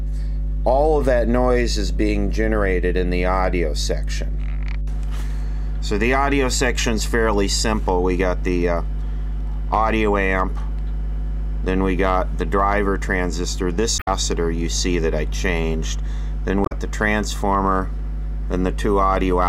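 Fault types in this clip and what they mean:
Mains hum: A steady low tone sits under everything for the whole clip, right at 50 Hz with a few low harmonics stacked on top. That's the power line leaking into the signal, typically from a ground loop or a transformer sitting too close to the cabling. Here it isn't subtle at all. The hum runs at roughly the same level as the wanted sound, so it competes with it rather than just lurking in the background.
Damaged data in a compressed stream: Two short glitches break the flow, one from 13.98 to 14.08 s and another from 16.63 to 16.72 s, each about a tenth of a second or a bit less. They come across as quick blips where the audio briefly breaks. That's what you get when part of the compressed data is corrupted, so the decoder misreads those frames, loses sync and has to hunt for the next clean frame before it can carry on.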